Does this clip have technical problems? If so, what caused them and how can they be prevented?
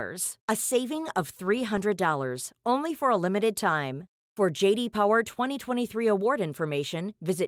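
No, there are no technical problems in this speech.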